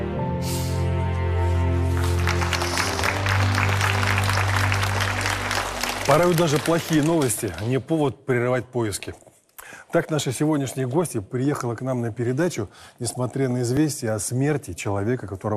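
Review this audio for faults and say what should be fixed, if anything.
A repeated buffer at 13.77 s: one 10 ms chunk plays twice because fresh audio arrived late, giving a short click-like stutter. The waveform shows the same 10 ms shape twice with a step at the join, and a spectrogram shows a thin vertical broadband line there. Larger playback buffering or higher scheduling priority for the audio thread would prevent it.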